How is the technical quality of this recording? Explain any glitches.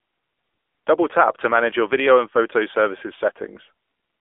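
The technical quality is poor, with one fault running through the whole recording. It is the AMR narrowband mobile codec. The speech is squeezed into a telephone band of 300 Hz to 3.5 kHz. At this low bitrate, around 7.4 kbps, the codec rebuilds the voice from a rough vocal-tract model, so it sounds plainly buzzy and synthetic.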